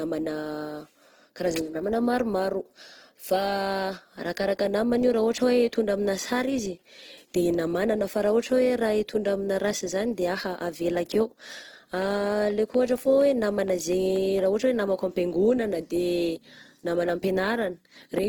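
Right from the start, the speech has a grainy, rough texture that stays with it all the way through. That's what Opus compression sounds like when it's pushed hard, and it's likely the cause here. The damage is plainly audible, and it fits a bitrate around 16 kbps in the music-style CELT mode. The band-energy filling leaves few actual holes, so you get noisy, gritty fill in place of swirl, even though the band stays full, reaching up to about 20.1 kHz.

Then, from 12.02 to 14.40 s, a train of clicks cuts in. It's about ten sharp ticks, all much the same shape, arriving at a steady 4.2 or so per second. They sit about 5 dB above the speech, so they poke right out and keep ticking through any gaps. A pulse repeating that regularly likely comes from something like interference from nearby gear or a faulty connection or power supply.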